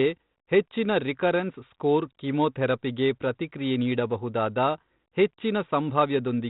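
No faults are audible in the speech, with only the light, expected coding texture and the 4 kHz band limit of its 32 kbit/s narrowband telephone path.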